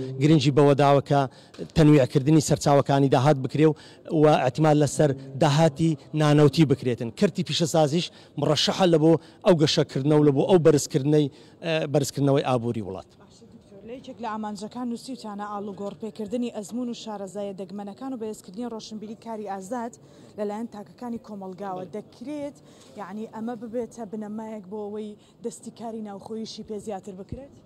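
No technical faults can be heard anywhere here.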